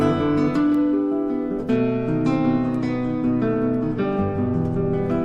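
From about 1.69 s to 5.02 s there's a Bluetooth SBC bit pool drop. The link got congested and the sender cut the bit pool to keep audio moving, which fits a fall from 28 to 13, around 102 kbps. With that few bits the top sub-bands get starved and everything else is quantised coarsely, so the treble goes dull and a gritty, grainy noise creeps in until things recover near 5.02 s.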